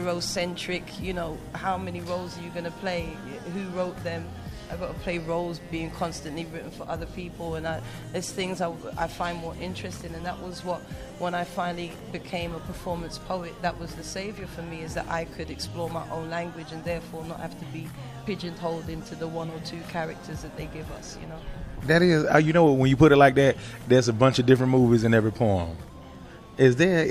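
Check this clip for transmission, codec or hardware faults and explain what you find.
No transmission, codec or hardware faults are evident anywhere in the recording.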